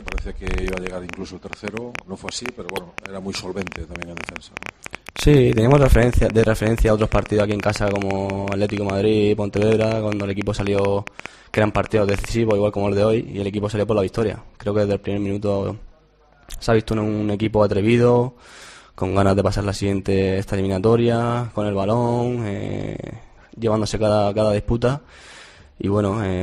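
From 0.08 s to 12.52 s, a train of clicks ticks and pops over the sound, about 8.8 per second at an uneven pace, roughly a hundred in all, and they carry on through the quieter gaps as well. The clicks share much the same sharp shape and peak at around 10 dB above the surrounding audio. A repeating pulse like this is likely interference from nearby equipment or a faulty connection or power supply.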